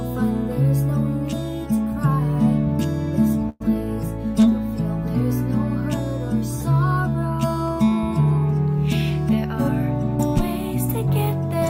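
At 3.49 s the sound stalls for about 0.13 s, to 3.62 s, with a short buzzy continuation of the last sound filling 108 ms before normal playback resumes. This is a call audio freeze, most likely packets delayed in transit leaving the jitter buffer empty. Unlike a dropout or packet loss, nothing is cut away: the audio picks up exactly where it paused, so the freeze adds 108 ms of delay rather than leaving a hole.

From 9.11 s to 9.54 s the audio runs noticeably hurried, at about 111% speed, while pitch stays unchanged. This is a jitter buffer speed-up: with more audio queued than the target, the receiver trims short pitch-period slices in quick succession, removing roughly 70 ms in total to bring the delay back down. Because the pitch holds steady, it is distinct from a plain sample-rate or clock error, which would raise pitch along with tempo.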